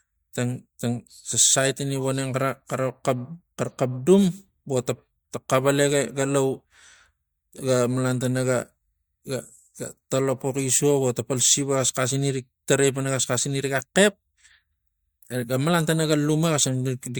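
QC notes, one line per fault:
No faults turn up anywhere in this speech recording, so there's nothing to log here.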